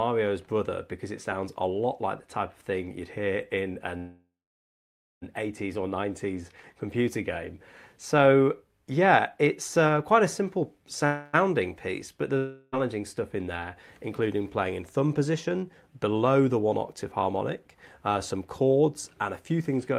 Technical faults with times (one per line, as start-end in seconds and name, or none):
3.97-5.24 call audio freeze
11.06-11.35 call audio freeze
12.37-12.74 long network dropout
17.22-19.77 jitter buffer speed-up